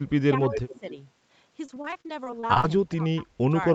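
From 0.0 to 0.85 s the speech dips and breaks up. This is speech suppressed in double talk. Both ends were likely talking at once. The echo canceller could not tell the near talker from the loudspeaker echo, so it turned everything down. The level falls by about 25 dB at its deepest. Around half a second of that stretch is affected, with the sound ducking and cutting out in pieces.

Inside that same stretch, from 0.54 to 0.79 s, a faint second copy of the speech appears. This is an echo leak. The far end was likely on a loudspeaker, and its canceller let part of the pickup through. That residue came back here. The copy trails the original by 272 ms. It sits about 10 dB below the direct speech.

From 1.65 to 2.64 s the speech turns choppy. This is repeated packet loss, heard as a robotic sound. Audio kept arriving late or not at all. Each hole was patched by stretching the last sound, and another hole followed quickly. 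The gaps are short, the longest about 35 ms. Roughly a quarter of the span is patched-over sound, and about 270 ms is simply missing.

From 2.88 to 3.53 s the speech is suppressed in double talk again. Both sides were likely talking together, and the canceller again pulled the level down. The drop reaches about 20 dB. Close to 0.4 s is affected, with the same ducking and broken pieces. Throughout the clip the top end stops at 8 kHz, as expected from the call path.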